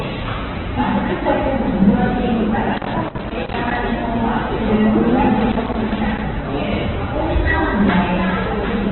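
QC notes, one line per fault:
throughout: Opus compression. The encoder likely ran Opus at a very low rate, consistent with about 8 kbps, holding band energies but filling starved bands with folded or noise content. Nothing above 4.1 kHz survives, so the sounds come across dull, rough and grainy.
2.74–3.77 s and 5.40–6.21 s: loose connector crackle. A worn or dirty contact in the signal path kept making and breaking, chopping the audio on and off many times in quick succession. Each stretch is heard as an irregular burst of scratchy crackle.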